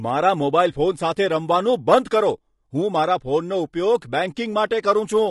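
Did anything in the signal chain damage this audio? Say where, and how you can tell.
Yes, at the codec: the speech is rough and grainy throughout, pointing to likely low-delay AAC compression near 32 kbps, whose short frames smear harmonics, unlike steady hiss.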